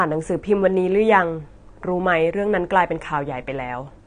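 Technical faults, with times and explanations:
Throughout, AAC compression: the speech sounds dull and smeared, with nothing above 9.7 kHz and a warbling, fizzy texture on sibilants and held vowels. The likely cause is an AAC-LC encoder starved of bits, which fits a rate near 32 kbps: it drops the top band and quantises the remaining frequency lines coarsely, leaving holes or noise-filled bands. A plain low-pass filter would dull the top without this swirling, time-varying grit.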